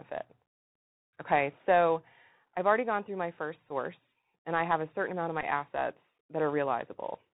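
Throughout the speech, the Bluetooth CVSD headset codec, at 64 kbps, cuts everything above 4 kHz and leaves a plainly audible granular hiss under the speech. Its one-bit steps lag on loud high sounds, so s sounds turn scratchy, unlike the smoother muffling of ordinary band-limiting.

From 3.69 to 3.71 s, just after "gone through my first", a Bluetooth headset packet repeated fault covers about 11.2 ms of lost audio, which fits three packets. Replaying the previous packet every 3.75 ms gives a brief buzz near 267 Hz rather than the silent gap of a plain dropout.

From 5.41 to 5.45 s, after "a certain amount of", the same fault covers about 15.0 ms, which fits four packets, and the 267 Hz buzz lasts longer.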